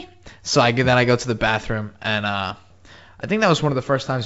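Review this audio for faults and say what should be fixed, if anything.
No faults heard; nothing here needs fixing.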